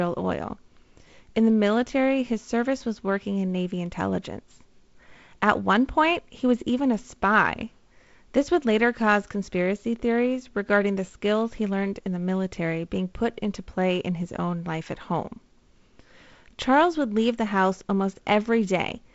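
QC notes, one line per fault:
No faults found; the speech shows normal G.722 wideband telephone coding, with nothing above 7.7 kHz, a light upper-band hiss and a slightly grainier lower band that fits the 48 kbit/s mode.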